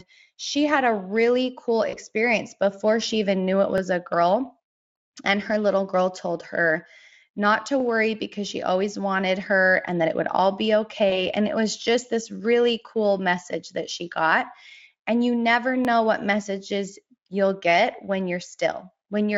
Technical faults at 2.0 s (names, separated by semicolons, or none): VoIP packet loss concealed by the speech codec